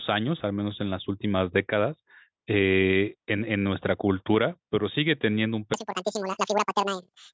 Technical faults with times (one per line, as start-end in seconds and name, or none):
5.74-7.33 wrong sample rate